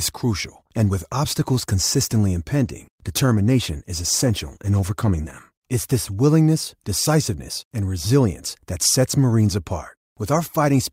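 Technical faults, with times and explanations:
2.66–5.47 s, call bitrate drop: right after "and with obstacles consistently", the speech turns rough and watery, with the upper frequencies dulled so consonants lose their crispness, and it stays degraded for about 2.75 s before clarity returns. The sound fits the encoder being told to spend far fewer bits, roughly a fall from 64 kbps to 19 kbps, after the call's bandwidth estimate dropped, so each frame is coded more coarsely and the top end is trimmed.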